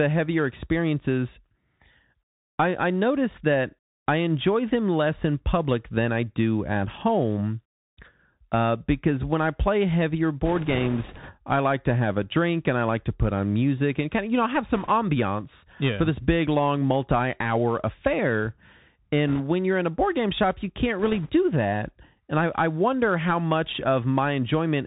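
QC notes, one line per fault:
throughout, Bluetooth CVSD headset codec: muffled, narrowband sound with nothing above 4 kHz, scratchy s sounds and a granular hiss underneath, because one-bit up/down coding at 64 kbps with an adaptive step cannot keep pace with fast, loud high-frequency detail.
10.45–11.31 s (after "when I play heavier", before "I like to have"), 14.76–14.90 s, 19.28–19.41 s (before "when you're in a"), 20.99–21.31 s (after "game shop you can't"), bit errors on a Bluetooth voice link: a rushing, crackly noise with no loud clicks, lighter in the last burst. Each flipped bit nudges the waveform only slightly and then fades, at an error rate of a few percent, roughly half that at 21 s.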